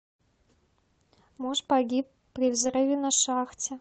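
From 1.41 to 1.55 s and again from 2.43 to 2.77 s the speech turns rough and noisy without dropping out: lost packets rebuilt from error correction through the Opus call path.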